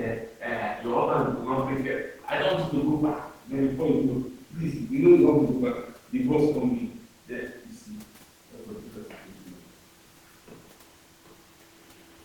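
No technical faults are audible in the speech, with the room noise sitting about 38 dB below it as part of the recording.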